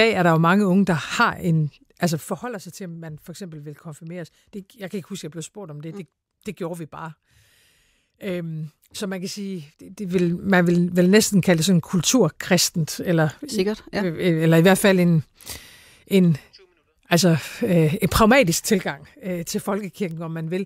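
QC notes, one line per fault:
2.05 to 2.48 s, zipper noise. The level drops by roughly 15 dB in 2 dB steps, about twenty steps a second. Nothing smooths the jumps between steps. Each one leaves a small click, so a ticking rides on the speech while the level falls.
9.81 to 10.33 s, zipper noise. The level rises by roughly 15 dB, again in 2 dB steps at about twenty a second. The same unsmoothed steps give the same zipping texture.
18.60 to 19.03 s, zipper noise. The level falls by roughly 10 dB in 2 dB steps, at about fifteen a second. The clicks are a little more widely spaced. It is still the same stepped, ticking sound.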